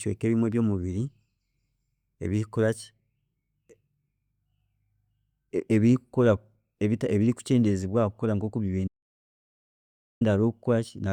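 Speech recording with an audio dropout to silence. The sound cuts out mid-flow at 8.88 s and returns at 10.21 s. The 1.33 s gap is silent, with no room tone. The input was likely lost while the recorder kept writing silence.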